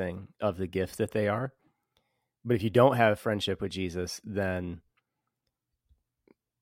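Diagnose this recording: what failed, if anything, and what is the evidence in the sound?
Nothing failed; no faults found.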